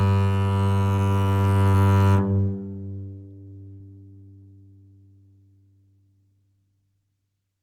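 At 3.74 s, a burst of packet loss hits the music. The last sound is held and fades for about 60 ms. Playback resumes at 3.81 s, with that stretch missing.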